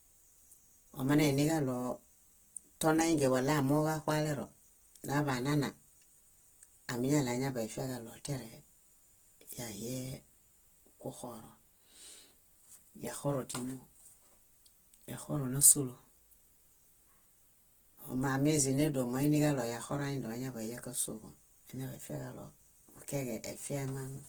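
Throughout, the speech sounds grainy and rough. This is likely Opus compression at a low bitrate near 16 kbps, filling starved bands with noise.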